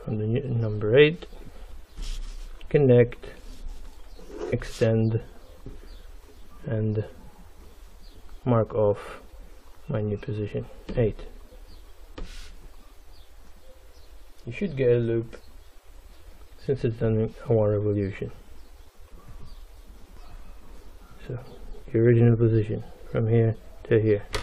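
Damaged data in a compressed stream makes the decoder misread frames and lose sync, producing brief chirps or blips at 4.52, 9.32 and 20.17 seconds.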